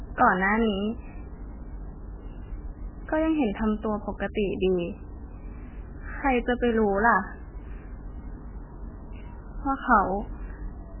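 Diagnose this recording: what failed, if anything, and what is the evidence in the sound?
The speech sounds dull and watery throughout, nothing above 3 kHz, swirling: likely heavy MP3 compression at the codec stage, fitting about 8 kbps.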